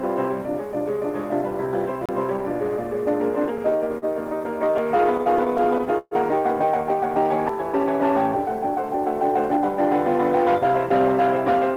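The audio ticks and briefly mutes at 2.06 to 2.09 s for around 30 ms, then resumes from a different spot, and does so again at 7.49 s with a very short mute. This is a CD skip: a knock or disc flaw threw the laser onto another turn of the spiral, so playback jumps by one or more disc rotations. Between 3.45 and 6.14 s the sound drags and stutters through 22 stalls, each bridged by a held continuation of the preceding audio, the longest lasting 130 ms. Together these fills total 386 ms, about 14% of that stretch, yet nothing is lost. These are repeated stalls (stutter): packets arrived late or slower than playback, so the jitter buffer kept emptying and the receiver extended the last sound until data caught up.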